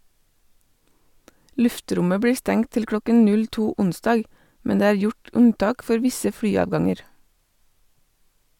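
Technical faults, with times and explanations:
Nothing jumps out here; the speech comes through without any technical trouble worth flagging.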